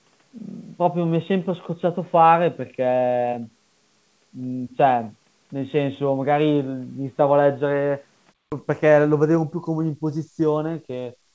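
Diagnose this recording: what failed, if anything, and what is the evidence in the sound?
What failed is the capture end, and it looks like an input switched to a poorer device. From the start up to 8.52 s the speech is boxy, with nothing above 3.8 kHz, and the background noise sits about 45 dB under the speech. Then a 200 ms gap, and it opens up to the full 8 kHz the G.722 call path carries, with no real jump in level. That is most likely the system falling back to a narrowband mic or headset profile, then recovering.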